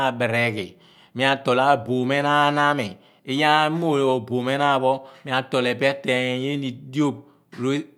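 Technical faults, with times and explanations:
No technical faults can be heard anywhere in this recording.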